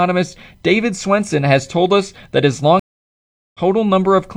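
Speech with a stream reconnect from 2.80 to 3.60 s: a flat 0.75 s gap on the waveform and a blank spectrogram column, then the audio resumes roughly 0.4 s later in the stream.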